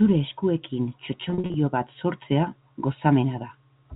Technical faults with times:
1.30-1.54 packet loss with pitch repetition

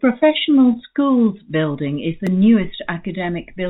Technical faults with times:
0.00-3.70 clock drift between sender and receiver
0.12-3.19 repeated timing corrections
2.27 block of digital silence

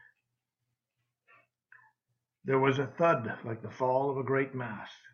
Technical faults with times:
none

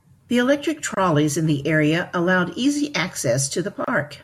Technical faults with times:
0.94-0.97 gap at a join of encoded pieces
3.84-3.88 gap at a join of encoded pieces

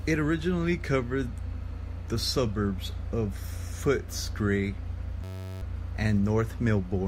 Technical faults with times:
5.24-5.62 system hang loop

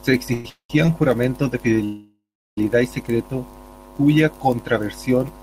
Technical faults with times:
0.33-0.70 call audio freeze
0.85-0.88 short stall from a late packet
1.84-2.58 call audio freeze

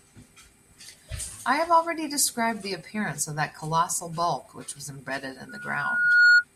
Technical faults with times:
5.49-6.44 loudspeaker feedback squeal

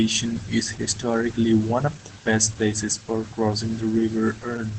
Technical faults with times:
0.00-4.78 Opus voice compression

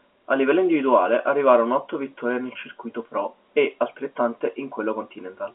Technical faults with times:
none

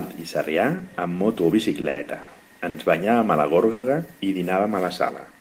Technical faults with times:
1.81-2.29 short stall from a late packet
2.69-2.76 short stall from a late packet
3.71-3.85 call audio freeze

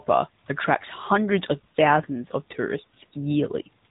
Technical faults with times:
0.00-3.90 AMR narrowband mobile codec

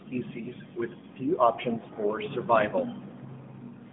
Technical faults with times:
none

